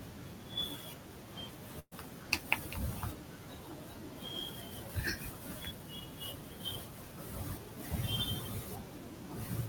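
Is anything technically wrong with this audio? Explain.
Yes, there's a burst of packet loss in this speech at 1.79 to 1.93 s. A short run of packets never made it in time, and the receiver papered over the hole by stretching the last bit of sound it had, fading it as the gap dragged on. You hear a brief held sound that dies away, close to silence for the last 50 ms or so, then the speech picks up again with about 120 ms of it simply gone.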